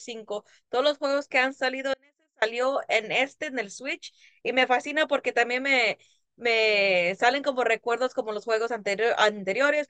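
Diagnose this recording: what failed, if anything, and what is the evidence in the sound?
The signal path likely broke somewhere upstream of a stage that kept running, most probably an intermittent analogue connection, since the recording continues through the break rather than going to digital silence. The result is an audio dropout to a faint residue: the speech cuts out abruptly at 1.94 s and returns at 2.42 s, a gap of about 0.48 s. Through that gap only a faint leak of the speech survives, roughly 35 dB below its normal level.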